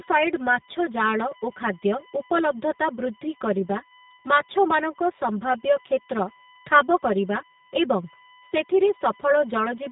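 It's a speech clip with three problems running the whole way through. First, there's USB whine, a fixed-pitch tone built on 1 kHz with its strongest harmonic up at 6 kHz, sitting roughly 25 dB below the speech. That's current drawn in 1 ms USB frames leaking into the audio through power or ground. Second, there's channel delay (comb filtering). One channel lags the other by around 5 ms, and when they're summed to mono the shared content cancels at evenly spaced notches starting near 100 Hz, which gives the voice a hollow, phasey colour. Third, there's plainly audible G.729 codec damage. Nothing gets through above 3.8 kHz, and the speech has that rough, slightly synthetic edge you'd expect from an 8 kbit/s codec rebuilding the voice from a vocal tract filter and a few pulses per 10 ms frame.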